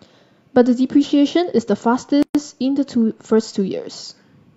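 Speech clip with one gap at a join of encoded pieces. From 2.23 to 2.35 s, a 122 ms silence cuts in. Separately encoded segments were joined untrimmed, leaving encoder delay and padding.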